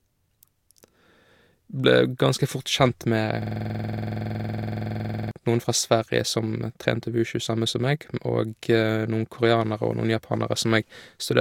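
A speech clip that, from 3.42 to 5.31 s, locks into a rapid machine-gun stutter, one 46 ms fragment repeating about forty times at 21.5 Hz. This is a system hang loop: the system froze while the sound hardware kept replaying one ring buffer, consistent with a 2048-sample buffer.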